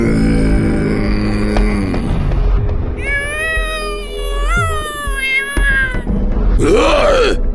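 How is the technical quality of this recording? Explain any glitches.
Nothing stood out on listening to this recording, and there are no glitches to explain.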